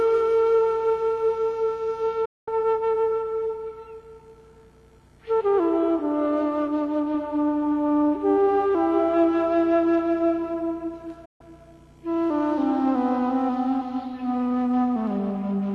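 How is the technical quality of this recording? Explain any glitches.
Two brief gaps spoil the recording: digital broadcast dropouts at 2.25 to 2.48 s and 11.25 to 11.41 s. The receiver lost valid frames and muted, fading out over about 8 ms, so the sound vanishes for roughly 0.22 s and 0.14 s, then resumes with that material missing. On a waveform or spectrogram, each appears as a sharp-edged, fully blank block.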